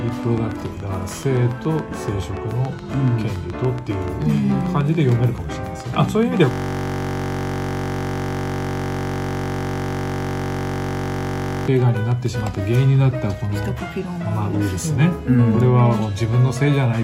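A steady train of clicks runs from 0.09 to 12.56 s, about 7 per second and evenly spaced, roughly a hundred in all, poking up to about 5 dB above the audio. It's likely interference from nearby gear or a faulty connection or power supply. On top of that, from 6.51 to 11.67 s there's a system hang loop. The computer froze while the hardware kept replaying one 21.33 ms slice of its buffer, which fits a 1024-sample buffer, so you hear a flat buzz at 46.9 Hz in place of the real sound.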